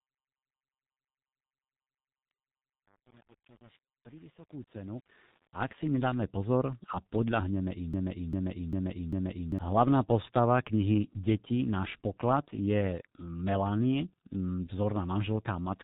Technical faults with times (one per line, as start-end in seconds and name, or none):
0.00-15.84 G.723.1 codec
7.94-9.59 broken-record loop